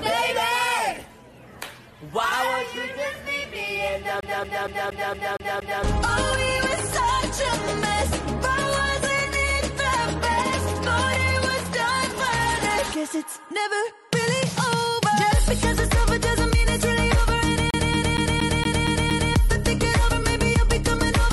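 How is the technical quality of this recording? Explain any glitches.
The recording has two glitches of the same kind. A CD stuck on one turn occurs from 4.21 to 5.84 s and again from 17.71 to 19.33 s. A scratch knocks the laser back one track each revolution, so the same 0.23 s slice of sound plays seven times in a row, with a brief mute at every jump. The result is a rapid, evenly spaced stutter before playback moves on.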